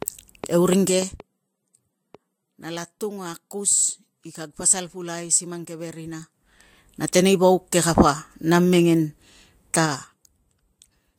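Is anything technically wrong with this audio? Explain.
Yes. From 0.02 to 2.16 s a train of clicks sits over the speech: about seven similar pulses, roughly 2.4 per second at an uneven pace, peaking around 5 dB above the signal. Likely external interference or a faulty connection injecting them. Unlike clipping distortion, they tick through pauses too.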